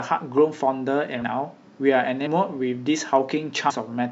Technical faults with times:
2.25 compressed frames skipped
3.69-3.72 compressed frames skipped

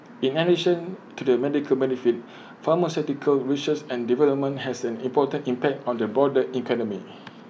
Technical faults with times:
none

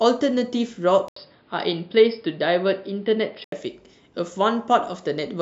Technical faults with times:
1.08-3.52 input switched to a poorer device

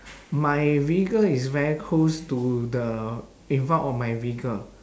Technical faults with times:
none

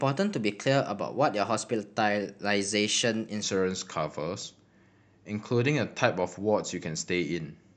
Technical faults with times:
0.00-3.43 section at the wrong speed

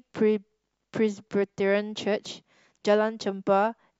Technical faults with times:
2.25 overlap between stream segments

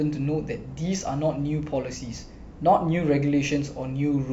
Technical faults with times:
0.00-4.33 sample clock jitter

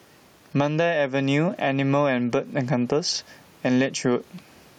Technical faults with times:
0.00-4.78 gain pumping

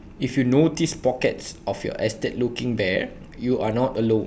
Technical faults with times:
none

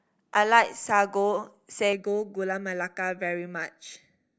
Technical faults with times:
1.93-4.39 channel delay (comb filtering)

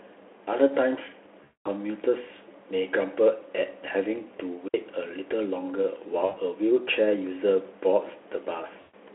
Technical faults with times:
1.43-1.68 VoIP packet loss concealed by the speech codec
4.68-4.74 digital wireless dropout
6.25-6.37 VoIP packet loss concealed by the speech codec
8.81-8.95 VoIP packet loss concealed by the speech codec

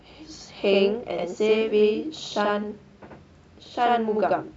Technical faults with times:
0.00-4.56 channel delay (doubling)

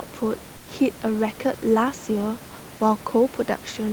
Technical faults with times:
0.57-0.67 comfort noise in place of the background

